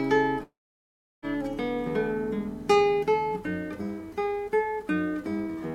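At 0.43 s the sound suddenly gives way to a fading buzzy tail, and most of the gap after that is just silence, around 0.7 s of it, until the audio picks up again at 1.25 s. What you're hearing is most likely a long network dropout: roughly 0.8 s of audio never arrived, so the receiver stretched the last bit it had, let that die away, then sat quiet. The missing stretch never comes back.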